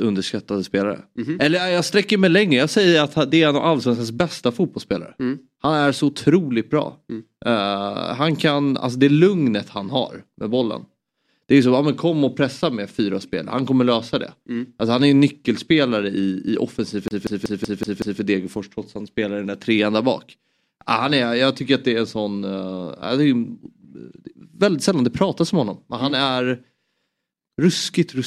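At 17.08–18.21 s, CD stuck on one turn: the laser keeps jumping back, stuttering one 0.19 s slice six times, seen as identical repeating waveform blocks.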